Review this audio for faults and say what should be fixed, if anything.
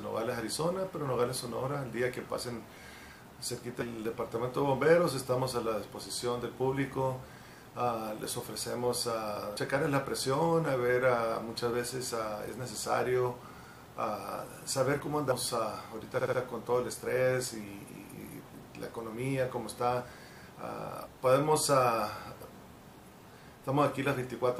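At 9.57 s the sound skips forward abruptly, with about a third of a second missing and the two sides butted together with no gap. This is likely audio missing between chunks: a recorder working in 6-second blocks dropped material while closing one block and opening the next. On a waveform the join shows as a sudden discontinuity; a spectrogram shows a vertical seam where the texture changes instantly. To prevent it, use double-buffered or overlapping capture so no samples are lost at block boundaries.

From 16.18 to 16.39 s there are repeated frames: a block of about 70 ms plays three extra times, so the passage stutters and the clip runs 209 ms longer than it should. This fits the same compressed frame being written or sent again and decoded each time. On a spectrogram the same short pattern repeats side by side, with a thin vertical line at each mismatched join. On a waveform, identical segments sit in a row. 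To prevent it, deduplicate frames by sequence number or timestamp before decoding.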